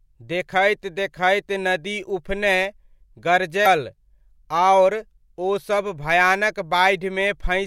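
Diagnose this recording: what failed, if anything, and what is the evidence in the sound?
At the codec stage, damaged data in a compressed stream breaks this speech at 3.62 to 3.66 s as a short glitch. Corrupt frames make the decoder lose sync and search for the next frame header, leaving a broadband smear on the spectrogram and a jagged discontinuity in the waveform.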